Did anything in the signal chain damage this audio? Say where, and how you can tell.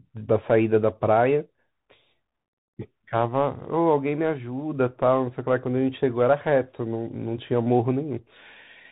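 Yes, at the codec stage: a Bluetooth CVSD headset codec runs through the whole speech clip, and its damage is plainly audible. Nothing reaches above 4 kHz, so the sound is telephone-narrow. The s sounds come out scratchy and a granular hiss sits under the speech, which fits a 64 kbps CVSD link. The codec sends one bit per sample saying only up or down, so its adaptive step cannot follow fast, loud high-frequency movement.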